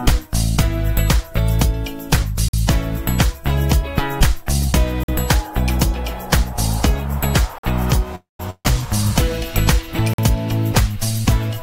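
At 2.48, 5.03 and 7.58 s the audio breaks with a gap between chunks: a 50 ms hole with abrupt edges, recurring every 2.5 s. The stream was delivered in fixed 2.5 s blocks, leaving silence at every join. Nothing is removed; the sound simply stops dead and restarts where it left off, which gives a regular, mechanical stutter rather than a random dropout.

From 8.15 to 8.40 s comes a call audio freeze. The last sound is held and stretched for about 240 ms, thinning into a fading buzz or hiss that falls silent for roughly 160 ms before normal audio returns. The likely cause is packets held up in transit so that the jitter buffer ran dry, with the receiver filling until they arrived. No audio is lost, but everything after it lands about 240 ms later than it should.

Right after, from 8.50 to 8.66 s, a burst of packet loss occurs. About 150 ms of audio never arrived in time. The receiver extended the preceding sound for about 145 ms as a decaying buzz or hiss, then dropped to near silence for roughly 50 ms. 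Unlike the freeze, playback resumes further along, so the section in between is missing and the sound jumps forward.

The same 50 ms gap between chunks recurs at 10.13 s, keeping the 2.5 s spacing.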